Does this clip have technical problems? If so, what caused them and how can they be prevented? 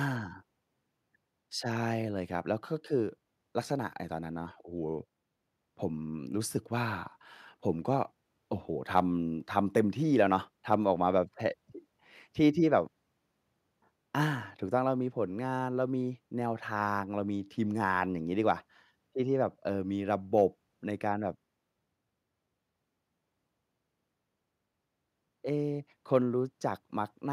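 No, nothing in this speech recording points to a technical fault, so there is no cause to trace and nothing to prevent.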